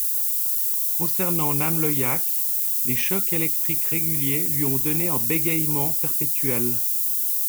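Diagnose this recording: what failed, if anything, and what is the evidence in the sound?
The fault sits at the sample-format conversion stage: low bit depth with noise shaping, present throughout the speech. A steady, thin hiss runs the whole length of the clip and rises sharply toward the top of the band. It is roughly 5 dB louder than the speech itself. The grain fits a 3-bit word length. Each rounding error is fed back and pushed upward in frequency. That keeps the low band cleaner but piles the noise into the highs.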